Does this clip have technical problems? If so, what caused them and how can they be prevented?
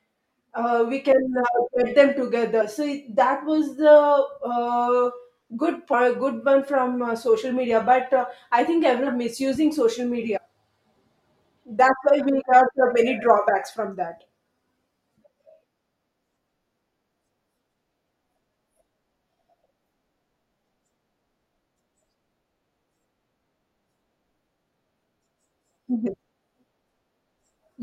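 Yes. Compressed frames are skipped at 2.60, 5.92, 9.06, 10.36–10.38, 12.40–12.42 and 26.06–26.08 s. The speech jumps ahead by roughly 50 to 300 ms, in multiples of 23.2 ms frames. Prevent this by checking file integrity and using error-protected transmission.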